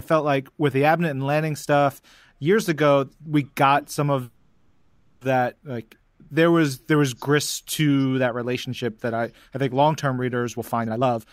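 At 4.23 s the speech stops moving and a fading buzz or hiss stretches on for about a second, until 5.23 s. This is a call audio freeze, likely from packets held up in transit that emptied the jitter buffer. The receiver extended the last sound, so a spectrogram shows smeared, decaying bands rather than silence. The speech then resumes where it stopped, nothing is lost, and the delay grows by 980 ms.

From 10.44 s to 11.26 s a jitter buffer speed-up plays the speech at 160% of normal rate while keeping its pitch. Short pitch-period pieces totalling about half a second were trimmed, which makes it sound hurried. The waveform shows compressed syllables, and harmonics on a spectrogram stay level.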